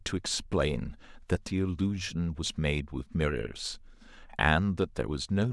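No technical faults can be heard anywhere in the speech signal, which stays steady and continuous throughout.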